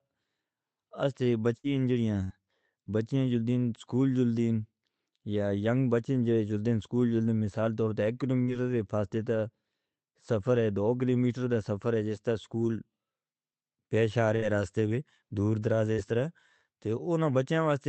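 Burst of packet loss hits this speech clip four times: at 1.57–1.67 s, 2.24–2.33 s, 8.42–8.51 s just before "دے فاصلے", and 14.36–14.45 s between "پیش آ" and "راستے میں دور". Each time a run of packets never arrived in time, so the receiver stretched the last sound for about 60 ms, letting it fade into a held buzz or hiss, then resumed with roughly 60 ms of speech skipped. The call codec's band limit near 8 kHz fits Opus at a moderate bitrate.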